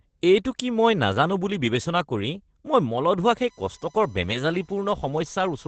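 Throughout, Opus voice compression leaves nothing above 8.7 kHz and codes the excitation coarsely, so speech sounds muffled, hoarse and slightly robotic, consistent with SILK at about 12 kbps.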